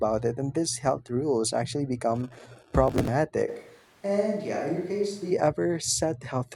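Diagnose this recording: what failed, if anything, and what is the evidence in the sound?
From 2.88 to 3.08 s the speech breaks into a gritty burst of crackle with hard-edged skips, then clears. This is processor overload crackle at the driver or buffer stage: around thirty buffers missed their deadline and were dropped rather than held, a pattern that fits buffers of roughly 5 ms.

At 3.50 s the speech abruptly turns roomy and hollow, thinner in the bass, about 5 dB quieter, with background noise rising to some 30 dB below the speech, then snaps back at 5.30 s. The likely cause is a switch to a distant microphone at the capture stage, as the close microphone's signal dropped out.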